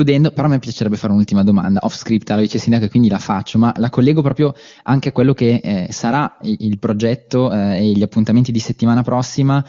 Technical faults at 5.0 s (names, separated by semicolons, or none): none